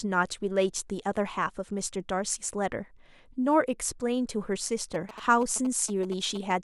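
From 4.94 s to 6.52 s a galloping dit-dit-dit of short buzzes cuts across the speech, sitting roughly 15 dB beneath it. These are GSM signalling bursts. A nearby 2G phone is sending only brief groups of radio bursts, as it does when setting up a call or message. The audio circuitry rectifies that RF into audible pulses, and the buzz carries the 217 Hz burst rate of the transmission.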